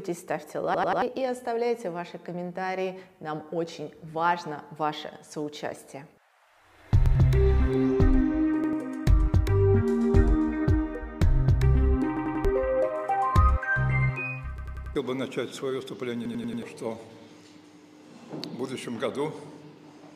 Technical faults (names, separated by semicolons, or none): repeated buffer